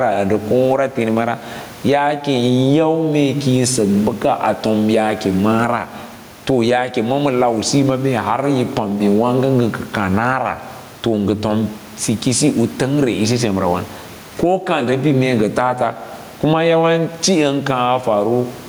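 Gain pumping runs through the whole clip. The input gain is likely set far too high, so a fast limiter clamps down on each loud syllable. The room noise sits about 33 dB below the speech, and the gain swings roughly 15 dB, flattening the dynamics.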